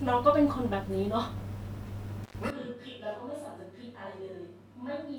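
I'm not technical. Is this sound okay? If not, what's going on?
No. At 2.24 to 2.36 seconds there's an intermittent contact: a loose cable or plug briefly loses connection, so the sound drops out for about a tenth of a second with crackle at each edge. That crackle sets it apart from a clean digital dropout.

From 2.50 seconds to the end, the speech suddenly turns roomy, hollow and quieter, with thinner bass and more background noise. This is a switch to a distant microphone, likely because the close mic failed. It's an instant change, not a gradual fade.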